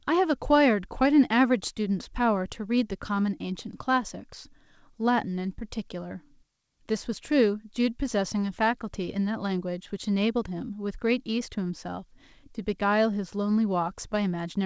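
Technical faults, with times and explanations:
No technical faults heard.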